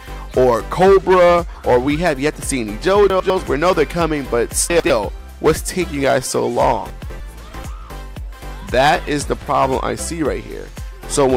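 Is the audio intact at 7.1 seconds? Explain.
No, 7.1 s sits inside a chunks-out-of-order glitch running from 6.9 to 7.2 s. A 100 ms chunk turns up two chunks late and plays after the ones meant to follow it, so that stretch sounds jumbled, with three hard joins.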